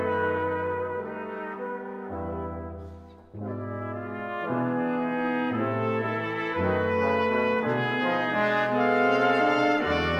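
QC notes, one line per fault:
Throughout: sample clock jitter. The converter's clock wanders on the order of a microsecond, so each sample lands slightly off its proper instant, and the timing error turns into an amplitude error proportional to how steeply the waveform is moving. That error sits roughly 45 dB under the signal as a fine hiss and grain that swell on loud, bright passages and disappear in quiet gaps. A steady noise floor would stay put in the silences.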